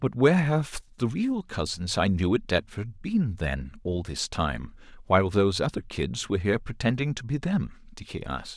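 A speech recording, with nothing technically wrong with it.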